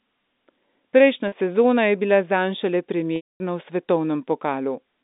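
At 1.28 s, just before "sezona je bila zanj", a packet loss with pitch repetition lasting 40 ms sounds like a brief held, buzzy note, with the last pitch period looped across the gap. At 3.16 s, after "je bila zanj šele", a 240 ms loss runs longer: the repeated cycle fades to silence, and the speech returns at 3.40 s through a short cross-fade. Both gaps fit lost 20 ms packets. This all sits within the narrow 200 Hz to 3.7 kHz G.711 line band.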